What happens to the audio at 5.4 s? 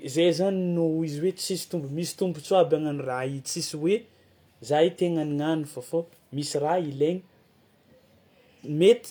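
Nothing goes wrong at 5.4 s; the speech carries on intact through that moment with no dropout, click, distortion or other audible fault.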